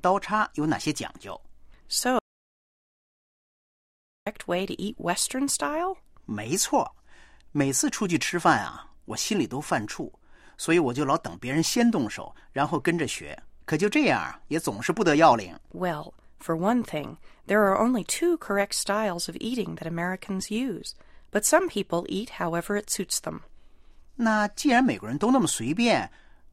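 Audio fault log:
2.19–4.27 s, audio dropout to silence: the sound cuts off mid-flow and returns about 2.08 s later, with silence between and no room tone at all. This most likely comes from the input being lost while recording continued writing silence.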